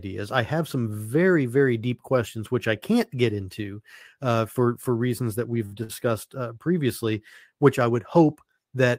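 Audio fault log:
5.65–5.74 s and 5.83–5.92 s, short stall from a late packet: right after "for for reasons that" and again just before "uh previously which I", the jitter buffer ran dry. The receiver held the last sound for about 60 ms, then about 54 ms, so nothing is lost but the speech lags slightly and drones briefly. On a spectrogram these show as flat, frozen harmonic bands. On the waveform they appear as repeated, near-identical cycles.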